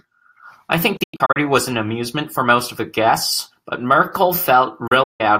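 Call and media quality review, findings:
Speech drops to silence in quick-faded short holes at 0.97–1.37 s and 4.87–5.21 s. Digital broadcast dropout: the receiver mutes on failed frames, and that audio is lost.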